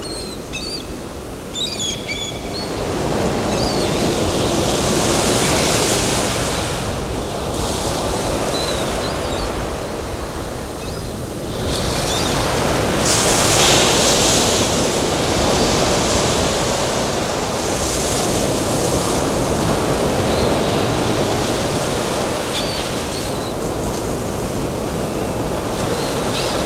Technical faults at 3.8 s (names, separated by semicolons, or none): none